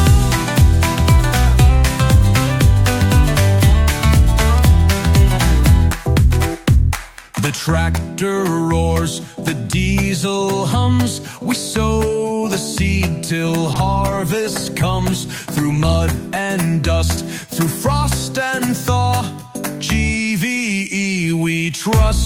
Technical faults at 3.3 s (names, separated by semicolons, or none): none